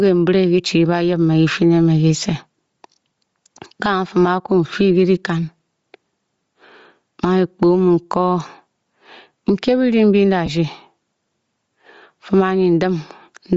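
Throughout the speech there is gain pumping: the gain swings by roughly 10 dB, pulled down each time the talker gets loud, so quiet and loud passages sit unnaturally close in level. The likely cause is a mic gain set far too high, with a fast limiter or compressor clamping down on each peak. Steady over-compression would flatten the dynamics without this audible pumping of the gain between phrases.

Also present across the whole clip is Bluetooth LC3 compression, plainly audible as a breathy, grainy edge on the voice, where the upper spectrum has been thinned out and replaced with noise-like fill. The sound fits a low bitrate around 32 kbps and short 7.5 ms frames, likely from a Bluetooth LE Audio link. Unlike simple low-pass band-limiting, the top end isn't just dull. It hisses with a synthetic texture.

From 10.46 to 10.49 s come lost LE Audio frames, a brief gap of about 15 ms, which fits two dropped 7.5 ms frames. 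The decoder reused the last spectrum with randomised signs, so the voice smears momentarily into noise rather than cutting to silence. Because the gap is so short it never fades away. This concealment smear distinguishes it from a hard dropout or a click.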